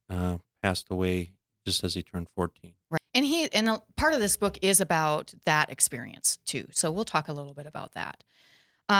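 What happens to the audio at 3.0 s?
At 2.97 to 2.99 s the speech skips ahead: roughly 0.4 s of audio is missing, and playback jumps straight from the sound before the cut to later material with no silence or fill inserted. The join is abrupt, as the two sides are spliced almost directly. This points to a stretch being dropped in transit, or discarded by an overflowing jitter buffer while later audio was queued, pulling playback delay down by about the same 0.4 s.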